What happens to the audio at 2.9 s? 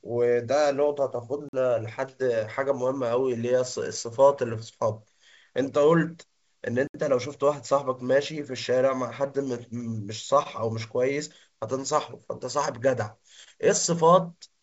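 At 2.9 s the speech falls inside a stretch of scattered short gaps, from 1.02 to 3.12 s. A few lost packets were patched by extending the last sound, leaving brief ticks or smears.

The sender's clock runs about 3% slow. This clock drift between sender and receiver keeps draining the jitter buffer throughout the clip.

To compensate, repeated timing corrections run from 0.12 to 14.62 s, playing at 98% speed. Short pieces are repeated.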